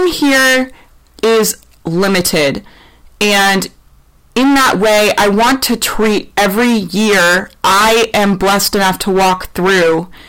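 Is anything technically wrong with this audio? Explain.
Yes. Hard clipping runs through the whole speech clip. The signal is driven about 26 dB beyond what the stage can pass, so roughly a third of the samples hit the ceiling and are sliced flat. Those squared-off tops add a dense spray of high harmonics, turning every loud syllable into a harsh, buzzing fuzz. On a waveform the peaks form flat plateaus. A spectrogram shows energy smeared upward into the top kHz range on each voiced sound.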